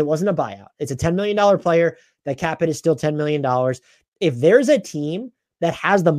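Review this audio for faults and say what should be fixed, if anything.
Nothing to fix: no faults found anywhere in the speech recording.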